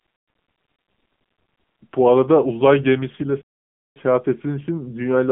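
From the start, the speech carries AMR narrowband mobile codec damage. Everything sits between about 150 Hz and 3.5 kHz, so a spectrogram shows a hard ceiling at 3.5 kHz with nothing above. The plainly buzzy, synthetic quality points to a low AMR-NB mode near 8 kbps.

At 3.41 s a playback stall cuts the sound off mid-flow for about 0.54 s, resuming at 3.96 s. The waveform drops to a flat line and the spectrogram shows a blank vertical gap, most likely from the player running short of data.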